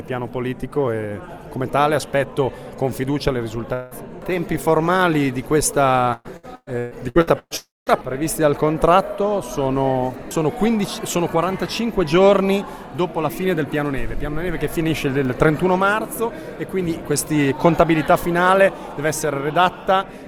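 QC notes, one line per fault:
3.73–3.94 s, long network dropout: about 180 ms of audio goes missing, likely from a network interruption, and a fading continuation of the last sound covers the gap.
6.13–7.54 s, repeated packet loss (robotic sound): seven gaps, the longest 124 ms, patched by repeating the last sound. Nearly half this span is filled in, so it sounds choppy and robotic.
7.57–7.89 s, long network dropout: about 300 ms is lost, likely a network interruption. A brief fading continuation of the last sound covers the start, then roughly 200 ms of silence follows before sound resumes.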